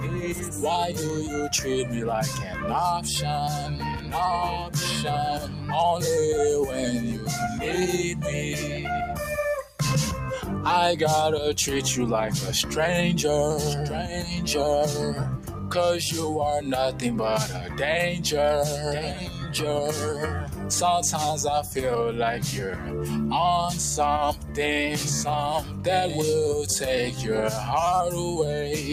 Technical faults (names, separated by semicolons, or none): noise suppressor applied to music or sounds; sound cut by the noise suppressor